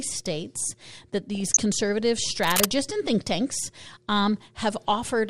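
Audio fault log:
Throughout – MP2 compression: The speech sounds dull and muffled, with a granular, gurgling edge. This is likely MPEG Layer II coding at a rate that fits about 80 kbps. Upper sub-bands drop out and flicker, and the remaining bands are coarsely quantised.
1.35–1.62 s – DAB burbling: Right after "states that", the speech burbles. Bit errors from weak reception slipped past error correction. Corrupted samples put short blips of noise in single sub-bands, and any corrupted scale factors that got through made sub-bands jump in level for up to a frame.
2.42–2.66 s – cable scratch noise: Just before "and think tanks", a dense, uneven scratching rustle rides over the speech at roughly the same loudness. It likely comes from a worn cable, connector or control being moved, with the contact resistance fluctuating rapidly.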